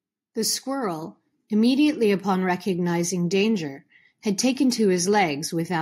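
A microphone volume step-up at 1.02 s: the call software judged the input too quiet and raised the microphone's level in a single jump of about 4 dB, so the speech and the background noise around it both become abruptly louder together at that instant.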